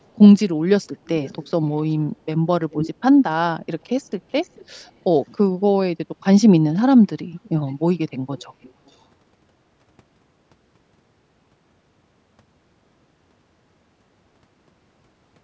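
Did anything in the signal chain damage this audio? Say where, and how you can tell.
Yes. Echo leak, at the call-processing stage: delayed repeats of the speech appear at 1.06, 1.77, 2.7, 4.41, 7.43, 7.69, 8.37 and 8.62 s, trailing by 423 to 468 ms and mostly well below the speech. The far-end echo canceller likely passed loudspeaker pickup back.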